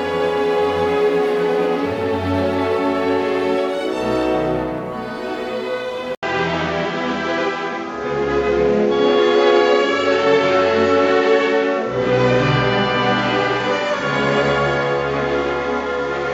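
At 6.15 s, after an 80 ms gap, the sound turns dull above 7.6 kHz and gains fresh background noise, likely from an input switched to a poorer device.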